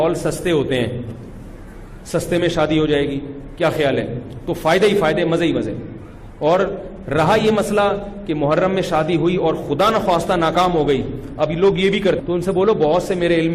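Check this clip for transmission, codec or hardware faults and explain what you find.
One fault is audible: a stream segment skipped, near the end of the clip. From 12.19 to 12.22 s the sound breaks with a short blip and jumps ahead, so the passage resumes at a later point than where it left off. The likely cause is a segmented stream in which one segment failed to load. The player dropped it and continued with the next segment, leaving a gap in the programme.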